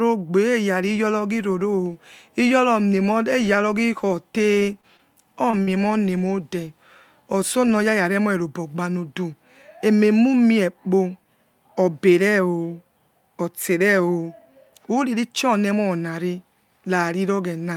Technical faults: short concealed packet loss

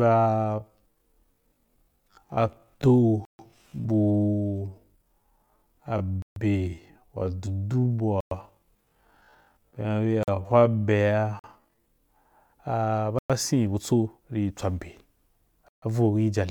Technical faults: time-stretched section; block of digital silence

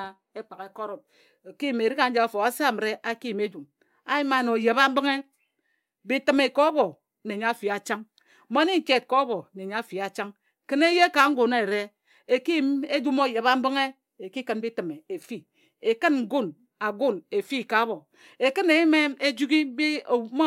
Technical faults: none

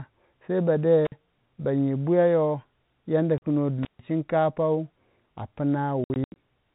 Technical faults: intermittent contact; packet loss filled with silence

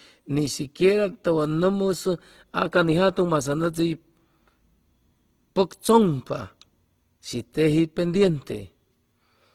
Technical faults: Opus compression

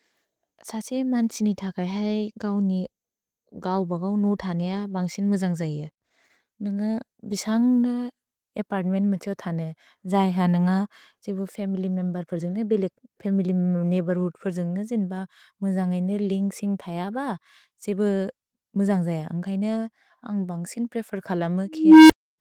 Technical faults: scattered short gaps; jitter buffer slow-down; jitter buffer speed-up; unstable filter

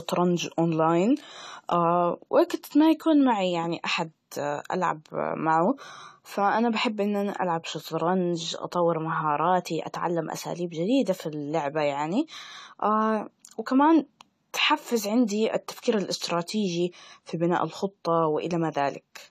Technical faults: AAC compression

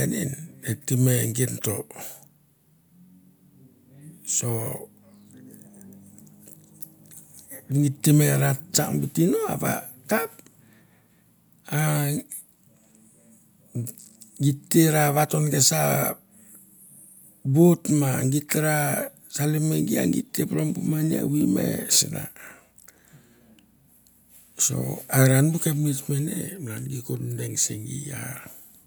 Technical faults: none

